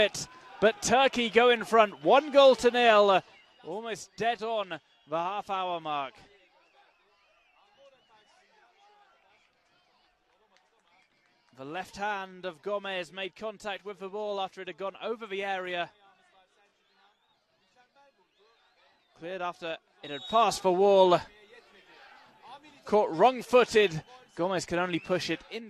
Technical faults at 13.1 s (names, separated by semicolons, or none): none